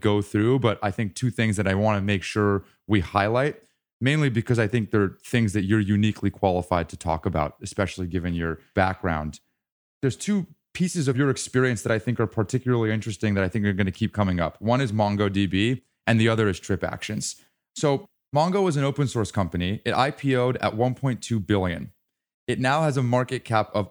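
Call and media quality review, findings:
Nothing to flag on this speech recording: no dropouts, glitches or anything else that needs a closer look.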